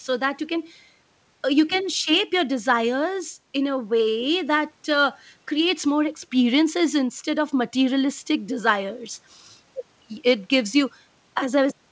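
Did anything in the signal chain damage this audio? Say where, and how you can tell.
No, nothing in the chain damaged it; the audio went through a call path whose band stops at 8 kHz, which fits a wideband call codec such as G.722 at 64 kbps, and that stage is working as designed.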